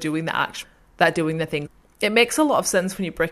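At 0.63 s and again from 1.65 to 1.67 s, the speech breaks briefly from damaged data in the compressed stream. The decoder misreads corrupted frames and hunts for the next valid header.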